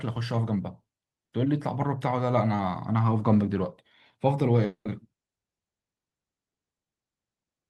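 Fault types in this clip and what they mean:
long network dropout: From 4.65 to 4.87 s the speech breaks, its last sound stretched into a fading buzz before about 90 ms of silence, and 200 ms never returns, likely lost packets. Spectrograms show smeared, decaying bands then a dark gap; waveforms taper flat.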